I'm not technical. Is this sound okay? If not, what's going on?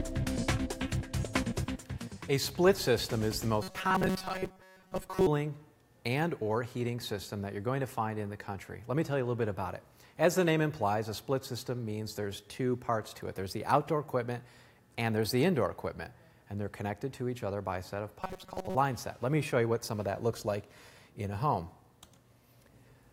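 No. Two stretches have a robotic sound from repeated short buffers, from 3.63 to 5.27 s and from 18.21 to 18.76 s. It's a flat, metallic buzz near 188 Hz, likely because new audio arrived too slowly and tiny slices about 5 ms long were replayed. Unlike a dropout, the sound never goes silent.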